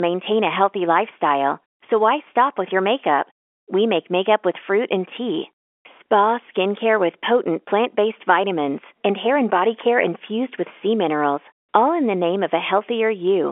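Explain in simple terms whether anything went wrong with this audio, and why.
Listening to this recording, nothing stood out as having gone wrong.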